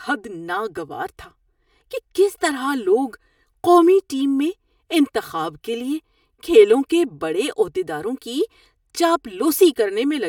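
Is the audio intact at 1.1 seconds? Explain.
No. At 1.1 seconds the speech carries channel delay comb filtering, present throughout the clip. One channel lags by about 3 ms, and summing to mono cancels evenly spaced frequencies from roughly 200 Hz up. The result is a hollow, phasey tone.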